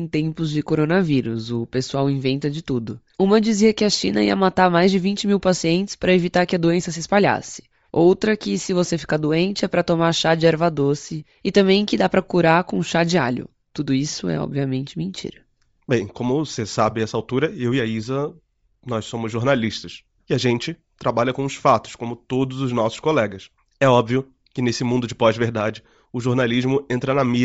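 From start to end, the speech carries a breathy, grainy edge in the upper range, likely from Bluetooth LC3 compression. The transform coder has discarded high-frequency detail and filled it with noise, which points to roughly 32 kbps with 7.5 ms frames.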